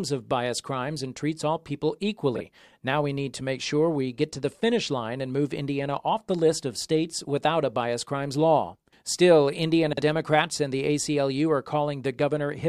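Twice, neighbouring runs of frames reached the decoder in the wrong order and were played that way, so frames out of order swap the halves of a short stretch. From 2.35 to 2.41 s the swapped blocks are about 23 ms each, which fits single frames exchanged. From 9.93 to 10.02 s they are about 46 ms each, which points to pairs of frames. Each stretch sounds like a brief garbled flutter, and no time is lost.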